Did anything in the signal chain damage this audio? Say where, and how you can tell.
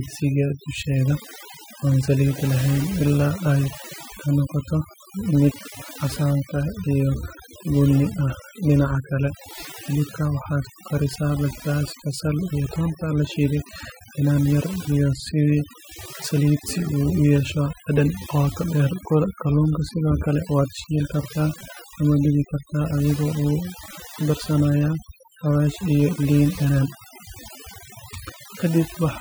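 Yes. The damage comes from overdone noise removal in the processing stage, and it runs through the whole speech clip. A noise reducer set far too aggressively keeps switching individual frequency bands down or off whenever their level sits near its noise estimate. Quiet speech detail falls below that threshold too. The gaps between phrases collapse to near silence sprinkled with twinkling, chirpy specks.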